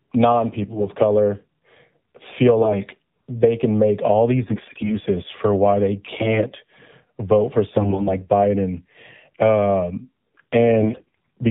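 The whole clip has passed through the AMR narrowband mobile codec. Speech is sampled at 8 kHz and rebuilt from a vocal-tract model driven by sparse pulses, so nothing above 4 kHz survives. The plainly audible buzz and synthetic edge on the voice points to a low mode, around 7.4 kbps. Sibilants are dulled, and the voice has the boxy, reedy colour of a mobile call.

On top of this come six bursts of AMR bit errors. A weak link flipped the lightly protected bits in each frame at a rate of roughly 5 to 7 percent, while the checks on the core bits still passed. So the excitation pulses land in the wrong places and the fine gain and spectral values drift. The first burst runs from 0.64 to 0.89 s. The second runs from 2.58 to 2.78 s, just before "they can make all". The third runs from 4.44 to 4.98 s, between "they can make all" and "for why they". The fourth runs from 6.06 to 6.44 s, just after "for why they". 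The last two run from 7.76 to 8.14 s and from 10.80 to 11.15 s. In each burst the pitch and loudness roughly hold, but the voice turns hoarse, scratchy and gargly.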